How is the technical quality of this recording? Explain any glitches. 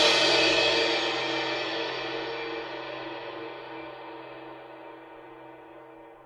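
The recording is marred by one fault that runs through the whole music clip.

Generation loss, throughout: the audio was likely decoded and re-encoded several times, around four passes, through a lossy codec whose character fits Opus at 64 kbit/s. Each pass quantised the signal on a shifted frame grid, so the noise piled up. The music sounds swirly, smeared and hollow, more so than that bitrate alone would give, and attacks are blurred, even though the bandwidth still reaches about 20 kHz.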